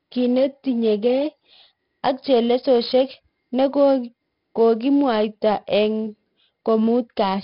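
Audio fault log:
Throughout: 4-bit ADPCM compression. Each sample is coded as a coarse 4-bit step away from a predicted value. The step size adapts as the speech goes on. The damage is heavy. A gritty hiss rides on the speech and grows and shrinks with its loudness. Sharp onsets distort because the step cannot grow fast enough. Nothing is heard above 5.3 kHz. That points to a sample rate near 11 kHz and about 44 kbps, which leaves the speech dull.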